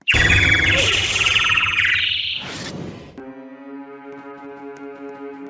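Nothing goes wrong anywhere in this one; there's no point where the sound stumbles, drops out or gets damaged.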